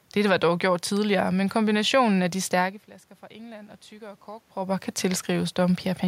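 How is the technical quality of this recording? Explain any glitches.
One glitch stands out: automatic gain rising from 3.27 to 5.85 s, just after "de stærke flasker fra". The input dropped by about 20 dB, likely because the talker moved back, and the gain control responded by slowly adding about 4 dB. Voice and room noise swell together over more than two seconds.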